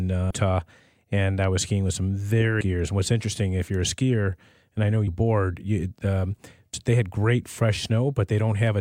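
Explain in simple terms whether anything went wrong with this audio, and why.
Compressed frames were skipped: blocks of the compressed file, each 32 ms long, were missing or rejected by the decoder as damaged. The sound jumps ahead by roughly 0.3, 0.4 and 0.3 s at 0.3, 2.61 and 6.74 s.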